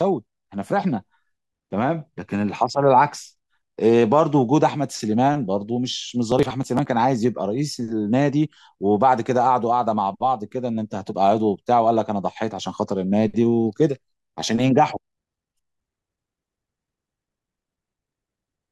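From 6.10 to 6.86 s the speech breaks into processor overload crackle: buffers of around 10 ms keep missing their deadline, about ten of them skipped. Unlike a single dropout, the result is a gritty burst of many tiny hard-edged gaps that stops when the load passes.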